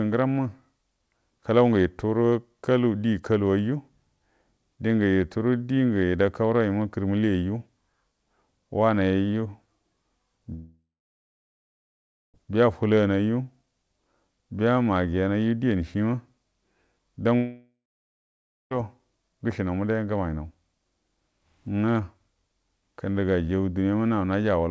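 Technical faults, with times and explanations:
10.54 to 12.36 s, long network dropout: about 1.8 s lost, a fading buzz then about 1.5 s of silence; likely packets stopped arriving and the receiver concealed briefly.
17.36 to 18.73 s, long network dropout: about 1.36 s gone, a short fading tail then about 0.96 s of silence, likely from another stall in packet delivery.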